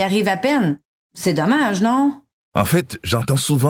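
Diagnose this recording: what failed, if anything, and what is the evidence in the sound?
Nothing failed in this recording, and nothing in the sound points to a fault at any stage.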